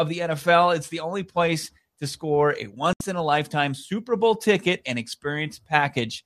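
It's a speech clip with a digital broadcast dropout: right after "place to score a" the sound cuts to silence at 2.93 s and comes back at 3.01 s with "in a lifetime". The receiver muted on bad or missing frames, so roughly 72 ms of programme is simply gone, which fits about three lost frames.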